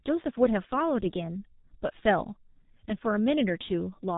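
From start to finish the speech carries heavy G.723.1 codec damage. Nothing above 3.8 kHz survives, and the low rate, about 6.3 kbit/s, leaves the slow 30 ms frame model smearing transitions. The result sounds muffled and hoarse, with blurred consonants.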